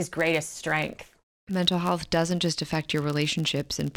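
A filter restarted on every block runs throughout, discarding its state at each block boundary and starting again from silence. Each restart leaves a small transient, so the speech carries a buzz at about 86 Hz that rises and falls with its level, which fits a 512-sample block.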